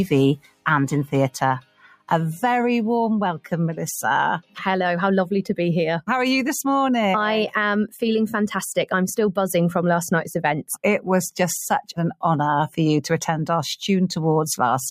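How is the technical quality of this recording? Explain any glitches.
The technical quality is compromised by a speech-tuned noise suppressor that processes the whole recording. Throughout the clip, that noise suppressor applied to music or sounds keeps working on material it was never designed for. It treats steady tones, ambience and tails as noise. It pulls them down by a few decibels, swinging by roughly 5 dB as it reacts. Attacks slip through, but sustained parts sink. The result is a pumping and a thinner, less even sound.

In three places the sound is cut by the noise suppressor more heavily. These are 0.37 to 0.66 s, 1.61 to 2.1 s and 4.42 to 4.57 s. The first two dip by about 19 dB and the third by about 16 dB. The suppressor misread these stretches as noise and clamped down hard. Held or decaying sound sinks in level there. Decays are chopped short.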